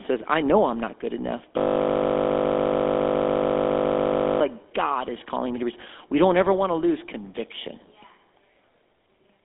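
Throughout, the speech carries the buzzy, gravelly roughness of the GSM full-rate codec, consistent with its 13 kbps coding. The band is confined to roughly 200 Hz to 3.6 kHz. On a spectrogram that shows as a hard ceiling with nothing above it, and harmonics look smeared and grainy from the coarse, pulse-driven excitation.

Right after "I'm not good enough", from 1.58 s to 4.41 s, a system hang loop takes over. The system froze and a single 20 ms slice repeats well over a hundred times, producing a steady 50 Hz buzz. The waveform shows an identical short segment tiled end to end, and the spectrogram shows evenly spaced vertical stripes with frozen harmonics.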